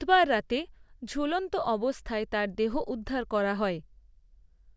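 No faults are audible anywhere in the recording.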